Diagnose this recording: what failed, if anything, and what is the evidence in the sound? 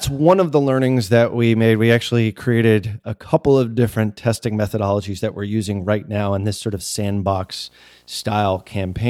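Video or display buzz got into the analogue wiring. Right after "in this sort of", at 7.28 s, a 60 Hz buzz with hash above it enters and runs to the end. It sits far below the speech. A nearby screen or video cable is coupling its field-rate signal into the audio path.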